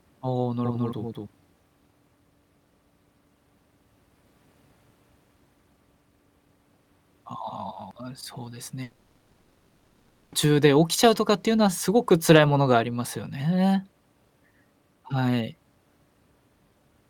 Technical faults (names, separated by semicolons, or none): doubled audio track; long network dropout